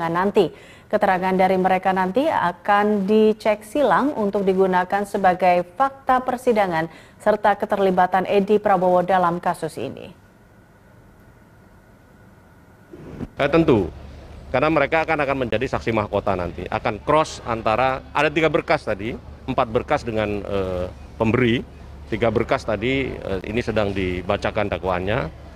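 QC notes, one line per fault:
15.51–15.53 s and 23.41 s, block of digital silence: the audio drops to silence for 20 ms and 15 ms, with no fade, so the sound cuts out and back abruptly, heard as a tick or short hole. The waveform shows a flat gap; the spectrogram shows broadband vertical lines at each edge.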